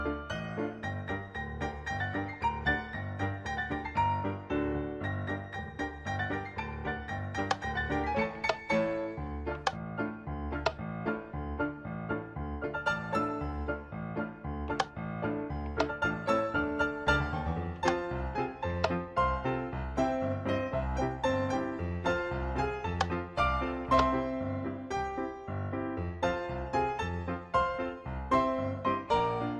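Nothing in here trips the ear as a technical fault, so there's nothing to flag anywhere along the way.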